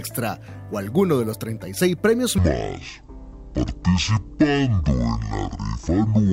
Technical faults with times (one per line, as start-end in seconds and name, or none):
2.38-6.33 section at the wrong speed